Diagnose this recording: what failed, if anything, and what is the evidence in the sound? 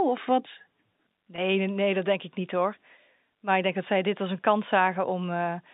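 At 1.36 s the speech briefly sticks: for about 20 ms, ending at 1.38 s, the sound holds on a slightly buzzy, frozen tone before carrying on. This is packet loss with pitch repetition at the network stage. Audio went missing in transit, a gap that fits two lost 10 ms packets, and the receiver bridged it by looping the last pitch period it had. The dropout is short enough that it never fades to silence, over a G.711 telephone line band of roughly 150 Hz to 3.7 kHz.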